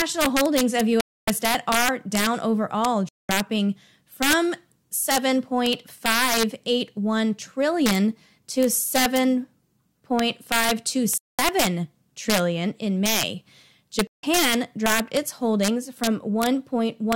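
A speech recording where the gain stage wraps past its integer limit instead of clamping, an integer overflow about 7 dB overdriven, so roughly 0.7 percent of samples go over and flip sign into harsh cracks. Playback also drops to silence for 0.27 s at 1.01 s, 0.21 s at 3.09 s, 0.21 s at 11.18 s and 0.16 s at 14.07 s, likely Bluetooth stalls from interference emptying the headphone buffer.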